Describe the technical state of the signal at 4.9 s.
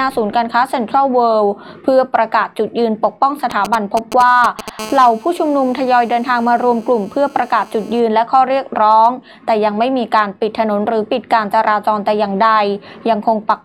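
At 4.9 s the signal carries GSM phone buzz, running from 4.79 s to 8.0 s. A nearby 2G handset transmitting in bursts about 217 times a second is being rectified somewhere in the audio circuit, so the radio pulses appear as audio. The result is a hard, raspy buzz at 217 Hz with a dense harmonic series, unrelated to the program material. It sits steadily, as during a call, at about 23 dB below the signal.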